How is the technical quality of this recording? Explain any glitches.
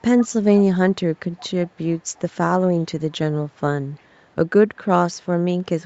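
The main glitch is echo leak, appearing five times: 0.56–0.94 s, 1.37–1.47 s, 1.65–2.2 s, 3.57–3.61 s and 3.98–4.06 s. You hear a faint, delayed copy of the speech trailing about 356 ms behind, roughly 25 to 30 dB down in the first three spots and barely there, around 40 dB down, in the last two. That's likely a far end on loudspeaker whose echo canceller let some of its mic pickup slip back into the call. Separately, the top end stops around 8 kHz, which is what the call path normally does.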